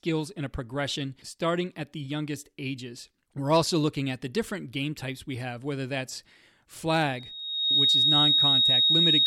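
At 7.14 s a loudspeaker feedback squeal begins in the speech. A single tone near 3.8 kHz swells over roughly 0.7 s to well above the speech, perhaps about 10 dB louder. The microphone is hearing its own loudspeaker. The loop runs away at that frequency until the clip ends.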